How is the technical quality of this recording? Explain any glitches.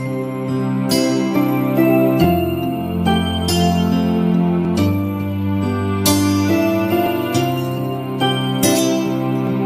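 There's one real problem here: a run of regular clicks from about 2.24 s to 9.47 s. Those are clock drift buffer slips, landing every 2.41 s, so four or so in all. The cause is likely two devices running on slightly mismatched clocks, off by several hundred parts per million. The buffer between them creeps out of step until about 70 samples get dropped or repeated at once. Each slip comes through as a short, evenly spaced click while sound is playing.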